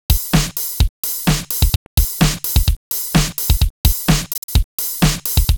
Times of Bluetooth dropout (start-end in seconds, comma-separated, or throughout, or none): 1.75-1.87, 4.33-4.49